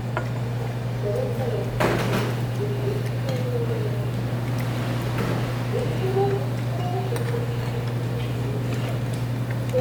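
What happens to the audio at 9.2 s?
Nothing goes wrong at 9.2 s: the sound carries on intact through that moment.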